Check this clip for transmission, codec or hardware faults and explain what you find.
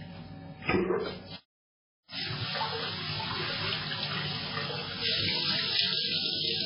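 There's one codec problem, and it runs through the whole clip. From start to finish nothing comes through above 5.3 kHz, so the sound is dull and boxed-in, with a watery, swirly texture and smeared attacks. That's likely heavy MP3 compression, where the encoder ran short of bits, pointing to something as low as 16 kbps. It chopped off the treble and kept dropping weak frequency detail in and out between frames.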